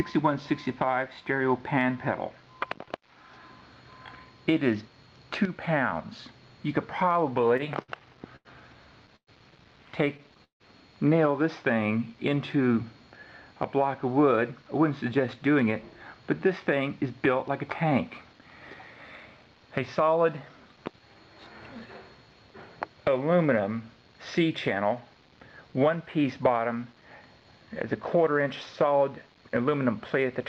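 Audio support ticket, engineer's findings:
Repeated stalls (stutter), 7.41–10.62 s: 12 stalls of the sound, longest 158 ms, about half a second filled in total, roughly a sixth of that span. Jitter buffer underrun from late or slow packet arrival; receiver extends the last sound, fading longer fills. No content lost, but the audio drags.

Jitter buffer slow-down, 11.74–12.74 s: audio at 91% speed, pitch unchanged, sounds drawn out. Buffer low or raising target delay; receiver repeats single pitch periods or pause fragments to add 95 ms of reserve.

Jitter buffer speed-up, 14.51–17.92 s: audio at 105% speed, pitch unchanged, hurried. Buffer overfilled, as after a burst of delayed packets. Receiver trims short pitch-period pieces, about 150 ms in total.

Jitter buffer speed-up, 24.75–26.85 s: same pattern, 105% speed, about a tenth of a second removed to pull the delay back to target.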